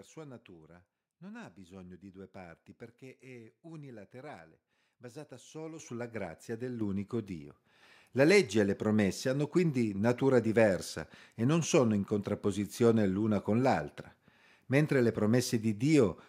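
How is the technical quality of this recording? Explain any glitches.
The recording has a microphone volume stepped up fault, occurring twice. At 5.79 s the level jumps by about 10 dB. At 6.81 s it jumps again by about 6 dB. The call software judged the input too quiet and raised the microphone's gain in single steps. Voice and background noise get louder together, instantly, with no fade. After the second step the speech sits noticeably louder than before.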